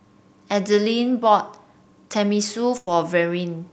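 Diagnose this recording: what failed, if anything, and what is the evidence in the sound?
The network stage failed. A burst of packet loss hits the speech from 2.77 to 2.88 s. Several packets in a row were lost or arrived too late to play. The receiver filled about 96 ms by extending the last sound it had and fading it down. You hear that as a held, dying tail instead of silence. When the audio resumes, it has jumped ahead. The 100 ms of speech in between is gone.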